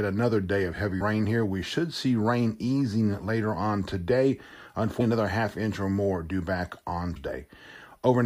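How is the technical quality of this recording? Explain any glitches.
Three short glitches break up the speech, all from damaged data in a compressed stream: at 1.0 s after "another day of heavy", at 4.99 s just before "another half inch or", and from 7.15 to 7.17 s after "or more due back". Corrupt bytes make the decoder misread frames and lose sync, giving a brief glitch while it searches for the next frame header.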